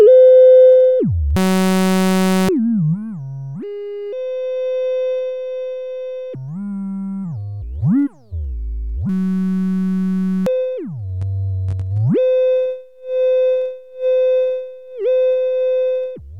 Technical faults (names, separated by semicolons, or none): system hang loop